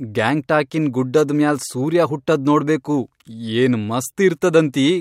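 No technical faults can be heard anywhere in the recording, and the speech signal stays intact and continuous throughout.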